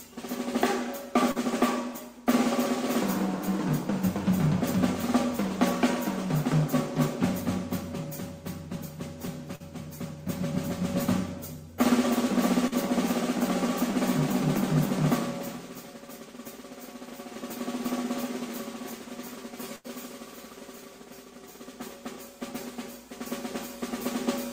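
At 1.31, 9.55 and 12.68 s there is short concealed packet loss: roughly 40 ms of audio each time arrived too late, and the receiver extrapolated the preceding sound before blending back in, leaving a brief smear or wobble.

At 19.76 s a burst of packet loss removes about 80 ms. The receiver continues the last sound for about 84 ms while fading it, so a held buzz or decaying hiss is heard before the audio resumes with a section missing.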